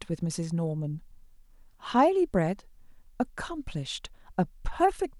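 No technical faults can be heard anywhere in this speech recording. There is no moment in it that calls for comment.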